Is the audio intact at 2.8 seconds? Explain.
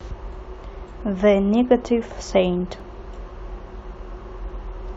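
No. At 2.80 s the speech jumps in a tiny skip, an overlap between stream segments: the player trimmed overlapping timestamps, discarding a few milliseconds of real audio.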